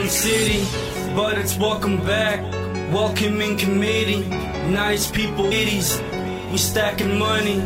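A stream segment skip is audible at 5.51 s, where the audio jumps abruptly forward with a brief blip at the join, so the material on either side does not connect. The likely cause is that one segment of a segmented stream failed to arrive or decode in time, and the player dropped it and carried on with the next segment. The waveform is spliced straight across the gap, with no fade or concealment, which produces the short discontinuity.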